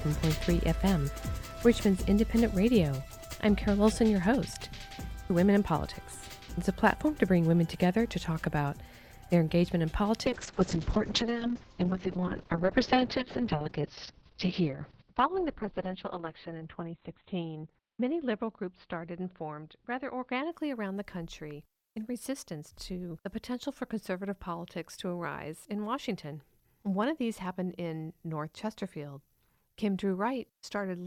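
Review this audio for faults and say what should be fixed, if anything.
A call bitrate drop runs from 10.26 to 20.57 s. The sound turns coarse and watery, and the top end collapses from about 20 kHz to 4 kHz. The worst stretch lasts about 5.5 s, which fits the encoder falling from roughly 128 kbps to about 6 kbps before recovering. Unlike packet loss, there are no gaps or clicks, only a sustained degradation. Keeping a higher minimum bitrate floor would prevent this.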